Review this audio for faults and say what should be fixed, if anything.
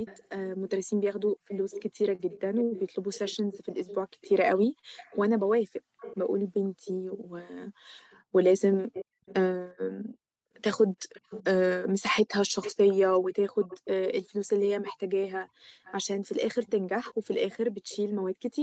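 Echo leak at 0.05–0.28, 1.48–7.19, 8.11–9.34, 10.55–11.46, 12.61–14.93 and 15.84–18.63 s: a copy of the speech, about 10 to 25 dB below it, trails by 366 to 397 ms, likely from a loudspeaker's output getting past the far end's echo canceller. A spectrogram shows ghost harmonics shifted right. Fix the far end with headphones or better echo cancellation.

Short stall from a late packet at 2.15–2.21, 2.64–2.73 and 4.79–4.85 s: the jitter buffer ran dry and held the sound for 33, 73 and 37 ms, with nothing lost. Flat smeared bands show on a spectrogram. A slightly deeper jitter buffer would prevent this.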